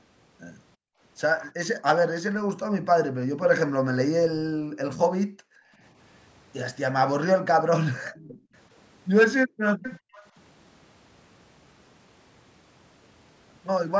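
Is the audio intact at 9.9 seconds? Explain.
No. From 9.83 to 10.27 s, a faint copy of the speech trails it by 390 ms, roughly 15 dB quieter. This is an echo leak. The likely cause is a far-end loudspeaker whose sound the echo canceller did not fully remove, so it returned.

Inside that span, from 9.99 to 10.14 s, the room sound drops out by about 40 dB, then comes back. This is background gated by the echo canceller. It clamped the microphone while the loudspeaker played, then released it.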